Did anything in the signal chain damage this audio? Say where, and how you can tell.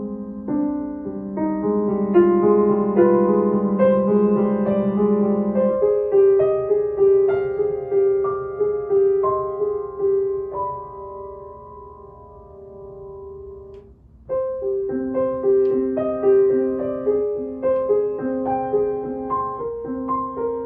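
No, nothing in the signal chain damaged this audio.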